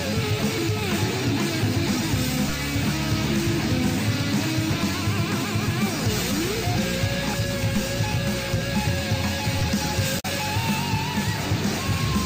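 A brief garbled blip breaks into the sound from 10.17 to 10.25 s, lasting about 90 ms, before playback carries on. This is damaged data in a compressed stream: bytes in that stretch of the encoded file were lost, zeroed or overwritten, so the decoder could not read those frames correctly. It lost synchronisation and had to hunt for the next valid frame header, and the misread span comes out as this short glitch.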